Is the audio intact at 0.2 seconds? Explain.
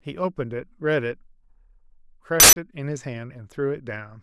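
Yes, the speech at 0.2 seconds is intact, with no audible dropout, click, distortion or other fault at that moment.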